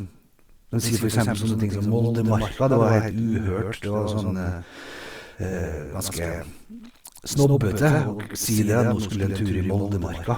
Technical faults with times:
0.00-10.38 doubled audio track

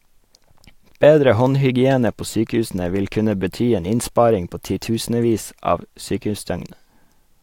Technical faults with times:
none

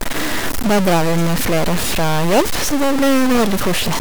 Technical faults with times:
0.00-4.01 stuck bit

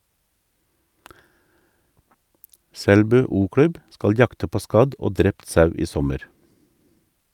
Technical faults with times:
none

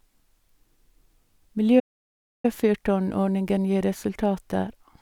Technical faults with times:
1.79-2.45 playback stall

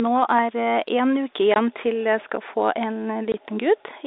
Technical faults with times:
1.54-1.56 packet loss filled with silence
3.32-3.34 packet loss filled with silence

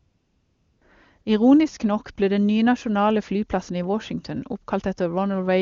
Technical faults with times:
0.00-0.81 AMR comfort noise
1.21-1.25 AMR comfort noise

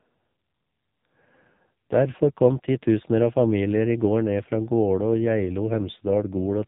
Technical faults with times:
0.00-6.68 AMR narrowband mobile codec
1.56-1.60 lost AMR speech frames

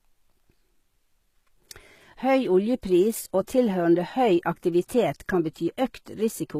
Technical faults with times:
0.00-6.59 HE-AAC compression
3.47 pre-echo

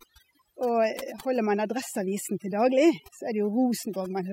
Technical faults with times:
0.00-4.33 overdone noise removal

